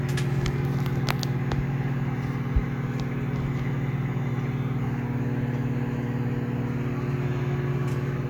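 No technical faults are audible anywhere in the sound.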